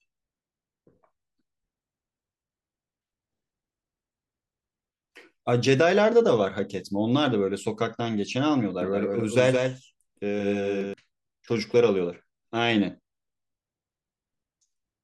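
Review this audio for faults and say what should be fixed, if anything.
From 8.82 to 10.94 s there's a doubled audio track: the speech is joined by a second copy trailing around 150 ms behind and roughly 5 dB quieter. It's full-band with no decay or room colour, and it cuts in and out abruptly at both ends, so it's a duplicate rather than an echo. The likely cause is the same feed being mixed in twice, either through a slower second capture path or an edit leaving two offset copies stacked. To prevent it, make sure each source reaches the mix once and check overlapping regions after edits.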